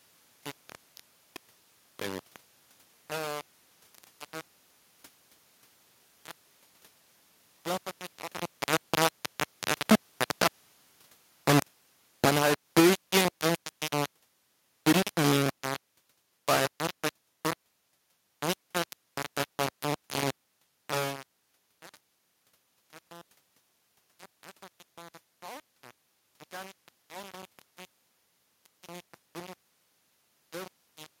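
Throughout the speech, a coarse, grainy distortion rides on every sound and changes with it, with the grain nearly as loud as the speech itself. The likely cause is low bit depth without dither, about 3 bits with plain rounding. The waveform shows a few stair-step levels, and the spectrogram shows broadband hash that appears and vanishes with the speech.

From 8.72 s, just after "was mich auch am", automatic gain falling sets in. The control judged the input too loud or its background noise too strong and eased its gain down by about 9 dB until 15.67 s, so the speech and its room background sink together. The waveform envelope tapers over that span, and the spectrogram dims evenly across all frequencies. The talker's own shift in distance around 8 s is separate from this gain change.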